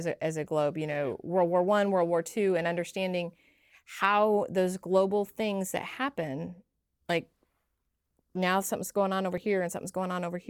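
Periodic USB or driver dropouts run from 3.41 s to 9.38 s, recurring every 2.0 s. Something repeatedly stalls the audio path, so a few milliseconds of speech are skipped outright each time, leaving evenly spaced ticks that sound only while speech is present.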